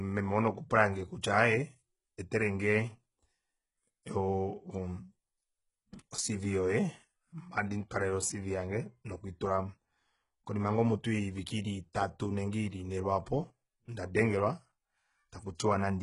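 Throughout, s sounds are gritty, metallic and lispy, with nothing above 11.1 kHz, likely from HE-AAC compression rebuilding the treble from lower bands at a low bitrate. At 11.93 s, a brief hiss spread over 17 ms leads a softened attack. This is pre-echo, the codec's block-wide quantisation noise spilling ahead of the transient.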